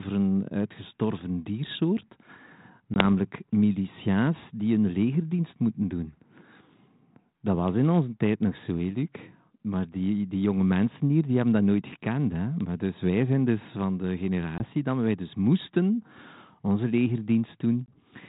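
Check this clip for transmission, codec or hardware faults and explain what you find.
Three brief dropouts show packet loss on an ADPCM call. They fall at 2.94 to 3.02 s, 14.58 to 14.64 s and 17.86 to 17.97 s. Each time, about one packet's worth of sound, 20 ms, drops to a hard-edged silence. The decoder's adaptive predictor and step size then disagree with the sender's. So the audio returns with brief distortion, and it settles within tens of milliseconds.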